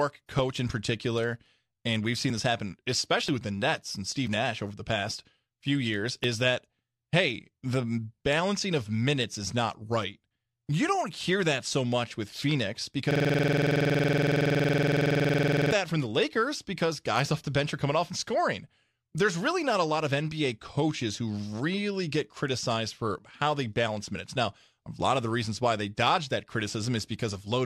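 At 3.29 s and again at 6.24 s there are brief skips from an overlap between stream segments. Adjacent segments claimed the same few milliseconds, and the player trimmed audio that was never duplicated. On a waveform, each appears as a sudden step discontinuity; a spectrogram shows a thin vertical broadband line.

From 13.11 s to 15.72 s a system hang loop takes over. While the system stalled, the hardware kept replaying one 46 ms block, which fits a 2048-sample buffer, about 56 times. The result is a 21.5 Hz buzz. The waveform shows an identical repeating chunk, and the spectrogram shows evenly spaced vertical stripes.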